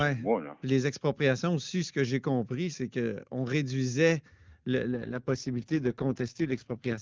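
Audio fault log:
4.93 s to the end: AMR rate drop. The speech turns rough, raspy and synthetic, which fits the AMR-WB codec being stepped down from 23.85 to 6.6 kbit/s and spending its bits on error protection, leaving too few to model the vocal tract and its pulses finely. Unlike a fall-back to narrowband, the band stays as wide as before, still reaching close to 7 kHz. Unlike packet loss, there is no gap or dropout.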